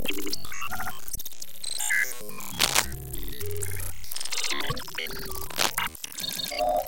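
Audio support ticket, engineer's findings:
Damaged data in compressed stream, 1.11–1.18 s and 4.66–4.72 s: brief squawk/blip. Corrupt frames misread; decoder loses sync and hunts for the next header. Spectrogram shows a short broadband smear and then a discontinuity; the waveform shows a hard jump.

Cable scratch noise, 2.58–2.86 s: dense rustling burst over the sound, about 5 dB above it. Likely a worn cable or connector being moved, with contact resistance fluctuating. Waveform shows jagged, uneven spikes; the spectrogram shows irregular broadband speckle.

Cable scratch noise, 5.50–5.71 s: same scratching texture, roughly level with the signal. Likely the same mechanism: an unstable contact adding noise bursts. Spectrogram shows patchy broadband noise; the waveform shows ragged bursts riding on the audio.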